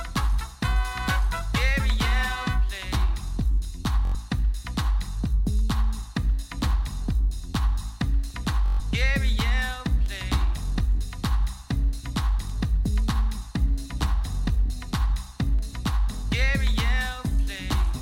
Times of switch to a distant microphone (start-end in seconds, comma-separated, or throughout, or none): none